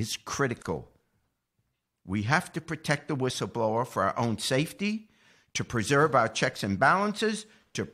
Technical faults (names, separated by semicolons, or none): gap at a join of encoded pieces